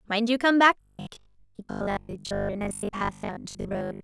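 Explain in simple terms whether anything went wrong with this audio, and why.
From 0.81 s to the end, the speech turns into a rigid, metallic buzz at 50 Hz. This is robotic sound from repeated short buffers. New audio likely arrived too slowly, so short chunks, about 20 ms each, were replayed most of the time.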